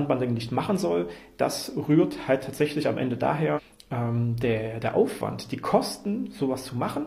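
At 3.53 s the sound jumps abruptly forward, with a brief blip lasting until about 3.59 s. This is a stream segment skipped: one segment of the segmented stream likely failed to load, and the player continued from the next, dropping that stretch of programme.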